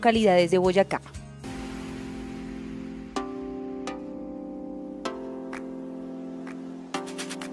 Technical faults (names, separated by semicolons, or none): none